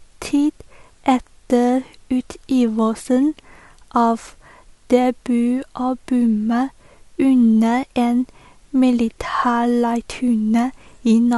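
No technical faults are audible.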